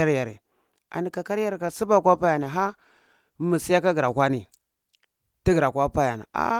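Right after "yare an", at 1.51 s, the speech turns rough and smeared, with a duller, muffled top end. It stays that way until about 3.75 s and is at its worst for roughly 1.7 s of that stretch. This is a call bitrate drop. The call's bandwidth estimate fell, so the encoder was forced to spend far fewer bits, which fits a fall from around 32 kbps to about 18 kbps. It coded the voice more coarsely until the rate recovered.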